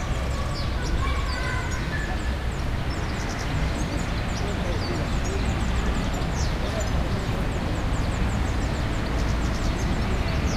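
No technical faults can be heard anywhere in this recording of sounds.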